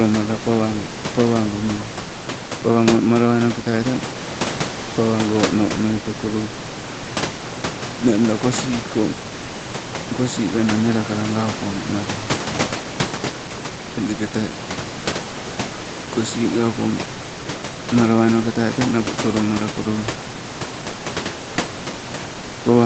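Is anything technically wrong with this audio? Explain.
No, nothing's actually wrong here: it's speech that's been through ordinary call microphone processing, with nothing above 8 kHz and the lowest bass trimmed, and the room noise you can hear sits about 11 dB under the speech, which is just part of the recording.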